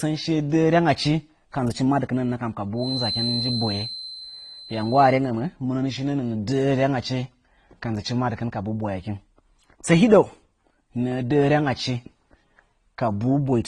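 Transcoding between lossy codecs is the likely cause throughout: the speech carries the different artefacts of two codecs heard together, fitting AAC then Opus, with nothing above 11.7 kHz. From 2.74 to 5.20 s, a loop at the edge of feedback likely rings, producing a thin 4.1 kHz feedback whistle that swells and fades slowly, roughly 10 dB below the speech.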